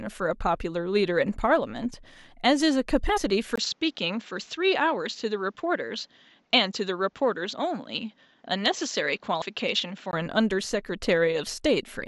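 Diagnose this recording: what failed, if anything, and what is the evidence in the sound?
Compressed frames skipped at 3.16 to 3.18 s and 9.41 s, at the codec stage: the audio jumps ahead where about two and four 23.2 ms frames went missing or were rejected.

Input switched to a poorer device at 3.56 s, likely at the driver stage. After a 20 ms silence, nothing is above 7.7 kHz and new noise sits about 40 dB down until 10.13 s.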